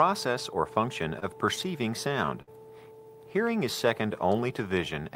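Between 1.19 and 2.50 s the audio shows repeated stalls (stutter): seven brief holds, the longest 58 ms, where the jitter buffer ran dry and the last sound was stretched. Nothing drops out, unlike packet-loss gaps. From 3.46 to 4.33 s a jitter buffer slow-down repeats pitch periods, adding 68 ms and running at about 93% speed, drawn out but without the falling pitch of a slowed recording.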